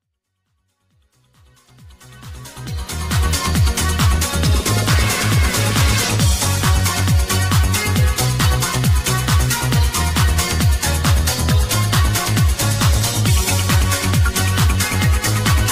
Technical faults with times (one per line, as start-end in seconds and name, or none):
none